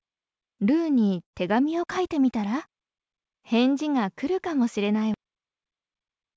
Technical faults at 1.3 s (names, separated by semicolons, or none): burst of packet loss